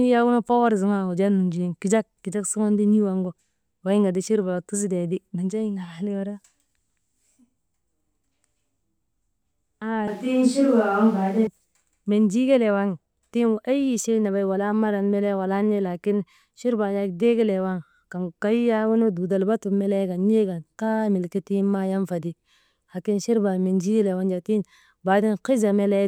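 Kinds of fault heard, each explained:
Switch to a distant microphone, 10.08 to 11.47 s: the speech turns suddenly roomy and hollow, losing bass, with room noise about 35 dB below it, while the level holds roughly steady. The close microphone's signal likely dropped, leaving a farther pickup, then snaps back.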